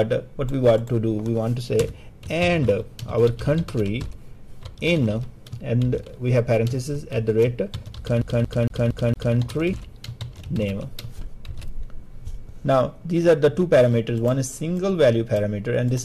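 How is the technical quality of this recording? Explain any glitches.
Two distinct glitches affect the recording, both just past the midpoint.

A CD stuck on one turn runs from 8.22 to 9.37 s. A scratch keeps knocking the laser back one track, so the same 230 ms slice of sound repeats five times with a brief mute at each jump, giving a fast, even skipping-disc stutter.

Damaged data in a compressed stream follows at 9.72 s. Corrupted bytes made the decoder misread frames and lose sync while hunting for the next frame header, producing a very short glitch lasting only about 12 ms.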